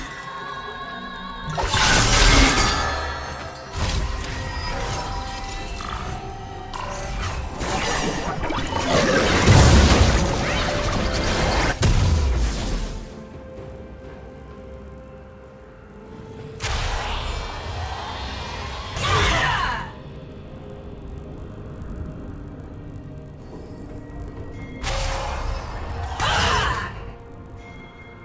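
From start to finish the sound carries a buzz at 50 Hz, the signature of a resampler restarted on every block. The conversion, which fits a drop from 44.1 kHz to 16 kHz, processes each 20 ms block in isolation, so the filter has no real neighbouring samples at either edge. Each boundary gets a small discontinuity, and at 50 per second these merge into a low rasp that rides on the signal and falls away when the sound stops.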